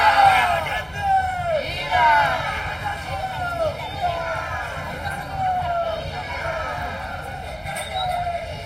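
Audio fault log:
throughout, channel delay (comb filtering): one channel runs late by roughly 1.5 ms before both are summed to mono, so shared content cancels at evenly spaced frequencies from around 400 Hz upward, leaving the sound hollow and phasey with fixed spectral notches.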